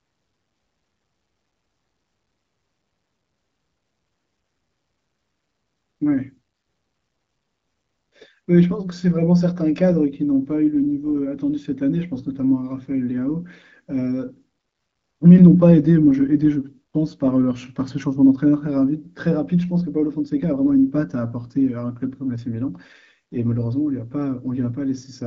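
The speech is carried by the AMR wideband (HD Voice) codec at 12.65 kbit/s, a rate at which its band up to 7 kHz stays clear with only the light coding character that rate leaves, and no technical fault can be heard anywhere in the clip.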